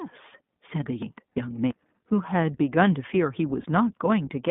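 The whole clip carries the sound of the iLBC codec. This is speech squeezed into a narrow telephone band. Only about 150 Hz to 3.6 kHz gets through, so the top end is missing. Each short frame is coded on its own, and the damage is plainly audible. The voice has a rough, slightly synthetic edge. The sound fits iLBC's 15.2 kbps mode with 20 ms frames.

From 1.02 to 1.71 s, chunks play out of order. A block of about 341 ms arrived one chunk late. It plays after the audio that should have followed it. Nothing is missing, but the sequence is wrong. Hard joins fall at the chunk boundaries. The passage sounds jumbled, as if the speech stumbles out of order.

Lost iLBC frames appear twice. The first falls from 1.30 to 1.32 s, inside the jumbled stretch. The second falls from 3.62 to 3.66 s. Each gap points to a single missing 20 ms frame. The decoder fills it by repeating the last pitch cycle mixed with noise. 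It is heard as a brief held, buzzy vowel. Because each frame stands alone, clean decoding returns almost at once.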